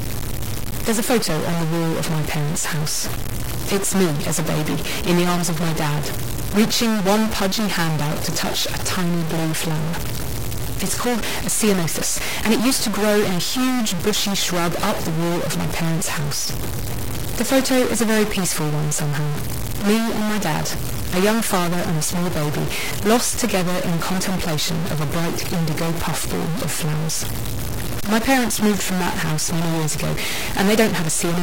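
Throughout, the speech has a harsh, buzzy distortion, and pauses fill with noise instead of going quiet. This points to a stuck bit, likely a fairly high data bit held fixed, shifting about half the samples by a step near -20 dBFS.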